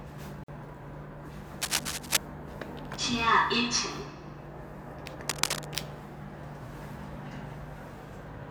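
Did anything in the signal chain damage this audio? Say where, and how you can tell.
Yes. There is a gap at a join of encoded pieces at 0.44 to 0.48 s, a hole of about 49 ms in otherwise continuous sound. Its edges are smeared, and the sound resumes exactly where it broke off. That points to the codec and file-assembly stage. Separately encoded segments were joined without trimming, so the encoder's start-up delay and the padding of the final frame left silence at the seam.

Cable scratch noise appears at 1.61 to 2.18 s and again at 5.28 to 5.66 s. Each time, dense, irregular bursts of scratchy rustle sit on top of the sound, somewhat louder than the sound itself, and then stop. This belongs to the analogue wiring stage. The likely cause is a worn cable, connector or control being moved, so its contact resistance jumps around rapidly and injects uneven noise into the signal.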